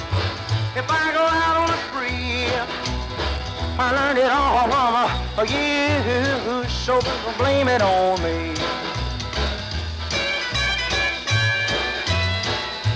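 Resampler restarted on every block, running through the whole audio: each 10 ms block is converted on its own without its neighbours' samples, so every edge carries a small error, heard as a 100 Hz buzz only while sound is present, consistent with a 24 kHz to 16 kHz conversion.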